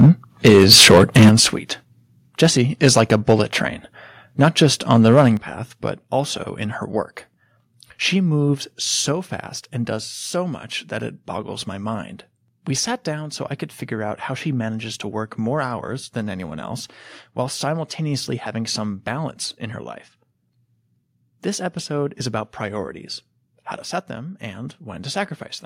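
Speech recorded with a hot microphone, showing microphone overload and several microphone volume step-downs. The overload shows up as harsh, crackling flat-topped peaks at 0.0 to 0.1 s (about 5 dB over), 0.45 to 1.41 s (about 11 dB over, the worst, with a large share of samples cut off), 2.42 to 2.47 s (about 4 dB), 2.83 to 3.33 s and 4.41 to 5.28 s (about 3 dB each). The likely cause is an input gain set too high, driving the waveform into the converter's ceiling so the tops are sheared off. The level then drops abruptly in single steps at 0.06 s (about 3 dB), 1.29 s (about 9 dB), 5.37 s (about 8 dB) and 9.12 s (about 3 dB), with voice and background falling together. This pattern likely comes from the call software detecting clipping and pulling the device's input volume down. Three of the four drops land during or just after an overloaded stretch.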